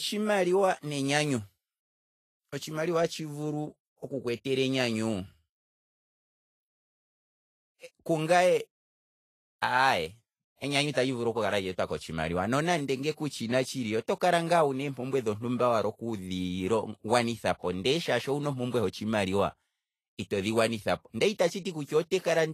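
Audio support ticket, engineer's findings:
Vorbis compression, likely cause, throughout the speech. Plainly audible hiss and graininess, roughened tones, softened consonant attacks; nothing above 14.2 kHz. Coarsely quantised treble replaced by noise-like fill, unlike broadband hiss, which would keep detail and extend higher. Bitrate sounds near 29 kbps.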